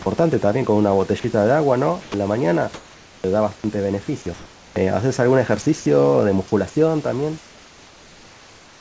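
Short stretches of speech drop out at 0.02 to 0.06 s, 1.20 to 1.24 s and 2.02 to 2.14 s, each replaced by a flat hiss. These are sound dropped by the voice detector, likely because the sender's detector judged soft speech to be background and stopped transmitting. The receiver filled each gap with synthetic noise. The first two gaps last 40 ms and the third 120 ms, so the speech briefly thins to noise and then returns.

From 2.74 to 3.24 s, comfort noise in place of the background takes over during a pause. Here the real room noise, which sits about 27 dB under the speech, gives way to a smooth, featureless hiss about 6 dB quieter. This is the likely result of discontinuous transmission, with the receiver generating noise shaped roughly like the background while nothing is being sent.

At the end of that pause, from 3.19 to 3.24 s, there is an onset clipped by the voice detector. The returning speech begins abruptly, missing its first 50 ms. 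This is likely because the detector was slow to register that sound had resumed, and comfort noise filled that opening instant instead.

Two more dropouts from the voice detector follow, at 3.56 to 3.64 s (80 ms) and 5.62 to 5.66 s (40 ms). Each briefly swaps speech for flat noise.

From 7.38 s to the end, comfort noise again replaces the background. It sounds smoother and about 3 dB quieter than the genuine room noise. Throughout the clip the audio has no content above 8 kHz, which fits the G.722 wideband codec on the call path.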